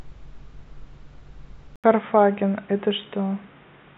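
At 1.76 s the speech drops out for about 80 ms. When it returns, it sounds dull and boxy. Nothing remains above 3.8 kHz, so the upper consonant detail is gone. The level shifts by roughly 5 dB, and a faint new background noise sits well below the speech. This change likely comes from an input switched to a poorer device, a narrower-band microphone or headset call profile. It lasts to the end of the clip.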